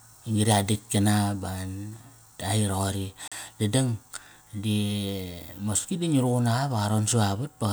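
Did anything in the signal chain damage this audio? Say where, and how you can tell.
Yes. A Bluetooth stall at 3.28 to 3.32 s: the speech drops to about 40 ms of silence, then resumes. That points to the playback stage. Radio interference likely delayed packets, the headphones' buffer emptied, and output paused until retransmitted audio arrived.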